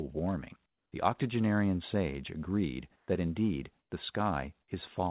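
A speech clip carried over a narrowband call path, with nothing above 4 kHz, which points to a G.711-type codec. Comfort noise in place of the background is heard in three pauses: 0.66 to 0.92 s, 2.96 to 3.08 s and 3.80 to 3.92 s. The real background, already about 45 to 48 dB below the loudest sound, turns into a flat, featureless hiss. It drops about 12 dB in the first gap, rises about 2 dB in the second and drops about 5 dB in the third. The likely cause is discontinuous transmission, with the receiver synthesising noise while the sender is silent.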